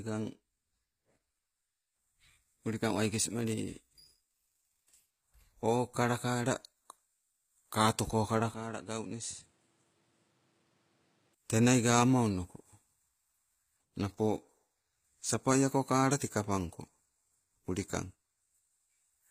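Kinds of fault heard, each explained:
HE-AAC compression: the spectrum stops near 15.4 kHz, with plainly audible codec damage throughout, likely from treble rebuilt by band replication rather than a simple low-pass cut.
Input switched to a poorer device: from 8.54 to 11.35 s, before "tenai gawama", the band ends at 11.4 kHz, the level drops around 10 dB, and new noise appears without any gap, likely a different microphone rather than a filter change.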